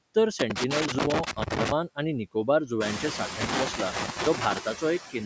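Noise suppressor artifacts run through the whole speech clip: the suppressor pulls steady noise down by about 10 dB frame by frame. From 0.39 to 1.72 s, just before "आनी निकोबार जुंव्यांचे", loose connector crackle appears as a contact makes and breaks, producing irregular scratchy bursts and chopped signal. It returns from 3.41 to 4.58 s, right after those words, shortly after the room noise rises by about 20 dB.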